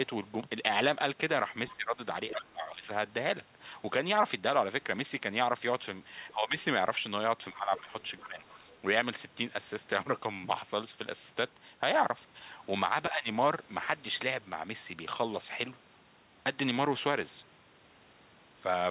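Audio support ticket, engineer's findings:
Other side's voice leaking through: faint second voice, about 20 to 30 dB under the talker, brief scraps at 1.68–1.72 s and 6.29–6.33 s, longer at 7.77–8.72 s. Likely residual loudspeaker echo the echo canceller left in the mic signal.

Speech suppressed in double talk: talker's level dips, deepest about 25 dB, at 1.74–2.89 s, 6.34–6.55 s, 7.52–8.44 s, 13.1–13.27 s, twice right after the leakage. Likely echo canceller ducking both voices during overlap.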